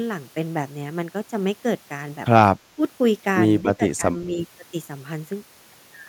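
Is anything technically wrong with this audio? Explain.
Yes. The speech is suppressed in double talk, from 2.75 to 2.82 s and from 3.61 to 4.06 s. Both ends likely spoke at once, so the echo canceller turned down the near talker with the echo. The speech drops by about 15 dB, then by about 10 dB.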